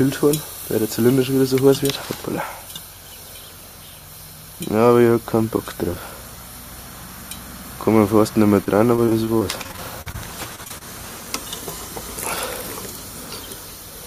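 Audio missing between chunks at 2.96 s: a sudden skip of roughly 30 ms, with the two sides joined directly. This is likely a loss at a chunk boundary in 3-second processing blocks.

Repeated packet loss (robotic sound) from 8.64 to 10.16 s and again from 10.56 to 10.83 s: a run of short holes, the longest 40 ms and 28 ms respectively, each patched by stretching the preceding sound. The result is a choppy texture, with about a sixth and a third of each stretch concealed.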